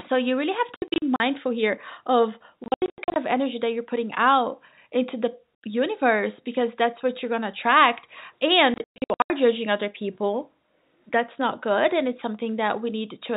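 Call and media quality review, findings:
Packet loss filled with silence, 0.76–1.2 s, 2.64–3.16 s, 8.74–9.3 s. Receiver inserts silence for lost packets; speech chopped by hard-edged gaps up to 120 ms, fitting 20 ms packets.

G.711 telephone coding working normally: band stops at 4 kHz, faint level-tracking quantisation hiss.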